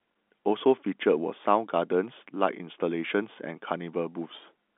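Nothing goes wrong anywhere in this speech, which just carries the ordinary sound of G.711 telephone coding, with the line band running from 200 Hz up to 3.5 kHz and nothing getting through above 3.7 kHz.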